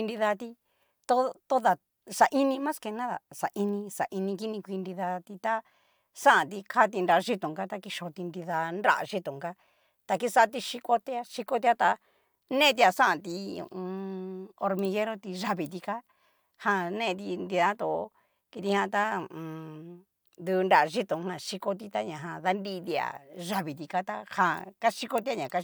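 No technical faults occur anywhere in the recording, so there is nothing to describe in time order.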